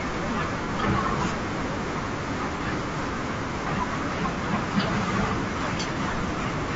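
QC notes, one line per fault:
throughout: low-delay AAC compression. The speech is rough and grainy, with noise filling the gaps between harmonics and a thin, synthetic top band, most likely from AAC-ELD at a low bitrate around 32 kbps. Its short frames resolve pitch poorly. A spectrogram shows smeared harmonics and speckled high frequencies.
0.65–0.69, 2.57–2.61, 4.34–4.38, 5.93–5.97: AAC frame loss with concealment. Each is a brief smeared, noisy patch of about 30 ms, where the decoder rebuilt a missing frame from the previous spectrum. A spectrogram shows short blurred vertical bands breaking the harmonic lines. The waveform looks slightly irregular there, without any dropout.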